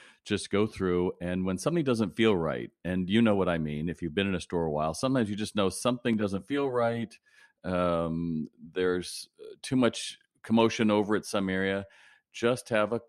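From 6.13 to 7.38 s the speech turns hollow and phasey. This is channel delay (comb filtering): one channel lags by about 10 ms before the mono sum, cutting evenly spaced notches from about 50 Hz upward. Unlike flanging, the notches stay fixed.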